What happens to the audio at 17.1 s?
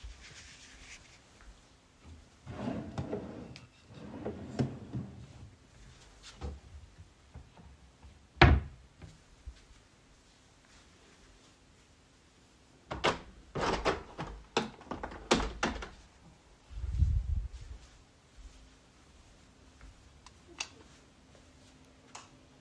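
Nothing goes wrong at 17.1 s; the sound plays through that moment intact, with no dropout, click or distortion.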